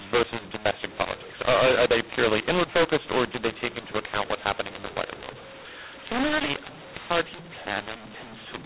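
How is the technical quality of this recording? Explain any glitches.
The technical quality is poor, because the whole recording suffers from a mu-law and A-law mix-up. The speech was encoded as mu-law G.711 telephone audio but decoded as A-law. The two standards map their 8-bit codes onto different logarithmic curves, so every sample lands at the wrong level: some too loud, some too soft, and the quietest ones pushed well above silence. The result is harsh, gritty distortion over the voice, with noise filling the pauses, on top of the narrow band below 4 kHz that 8,000-sample telephone coding gives.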